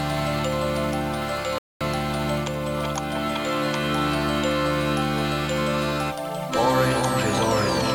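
At 1.58 s the sound cuts or quickly fades to silence and stays muted until 1.81 s, leaving a hole of about 224 ms before the programme resumes further along, with nothing of what fell inside the gap recovered. This is a digital broadcast dropout: the receiver stopped getting valid data, either losing the signal or rejecting frames that failed their checksum, and muted its output until good frames arrived. The length of the gap points to a run of around seven lost frames.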